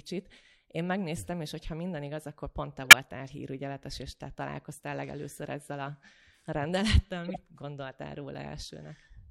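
Speech, with three corrupt frame decoded events. Damaged compressed frames were played anyway, so energy landed at wrong frequencies. There is a faint glitch at 1.58 to 1.63 s, a loud glitch at 2.84 to 3.00 s, and a moderate glitch at 7.25 to 7.39 s.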